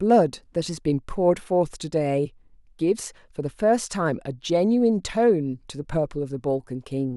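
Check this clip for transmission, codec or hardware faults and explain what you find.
Nothing in this speech recording points to a transmission, codec or hardware fault. There is nothing to report against any of those three areas.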